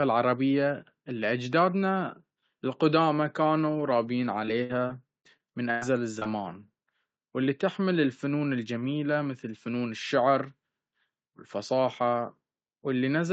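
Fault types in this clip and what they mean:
Repeated packet loss (robotic sound): Between 4.45 and 5.83 s the speech breaks up in six separate holes, the longest about 0.10 s, patched by stretching the last sound. Roughly a fifth of that stretch is filled in, giving a choppy texture rather than one isolated blip.
Short concealed packet loss: Two back-to-back 20 ms losses, at 6.19 and 6.23 s, are bridged by extending the preceding sound and blending back in. Unlike the robotic burst, this is a single brief smear lasting under a tenth of a second.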